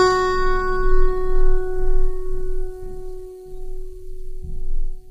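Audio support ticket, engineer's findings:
Low-delay AAC compression, throughout the music. Grainy, rough texture, dull synthetic-sounding top. Likely AAC-ELD short-frame coding, heavy damage fitting a bitrate near 24 kbps. Spectrogram: blurred harmonic lines, noise filling between them, patchy upper band.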